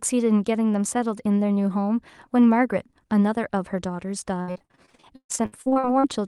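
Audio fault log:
4.41 to 6.05 s, repeated packet loss (robotic sound): about 21 separate holes arrive in quick succession, the longest about 136 ms. Each hole is papered over by stretching the last received sound, which covers roughly 0.72 s of the span, close to half of it. That repeated smearing gives a choppy texture with pieces missing. A single dropout would be one clean break, and steady codec coloring would run the whole clip, but this sound breaks up in bursts and then stops.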